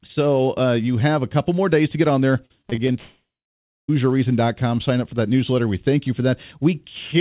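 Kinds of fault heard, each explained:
Repeated packet loss (robotic sound): Right after "to get on there", from 2.46 to 2.96 s, six short gaps break the sound, the longest 36 ms. Each is patched by repeating what came just before, so about a quarter of that stretch is filled-in, choppy audio.
Long network dropout: From 2.98 to 3.90 s, about 0.9 s of sound is missing. The last sound is stretched out and fades, leaving about 0.6 s of silence before the audio resumes further on. A lost stream of packets is the likely cause.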